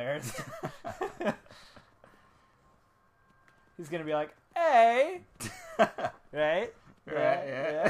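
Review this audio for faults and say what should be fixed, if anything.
No faults found in this audio, so nothing needs fixing.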